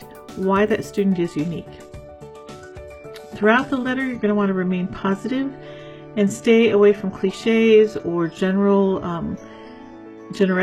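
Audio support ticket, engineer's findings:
Adaptive stream at a lower bitrate from 1.13 s to end: connection slowdown, player switched renditions. Sudden gapless drop, nothing above 12.3 kHz, heavier codec artefacts; fits a low-bitrate HE-AAC stream.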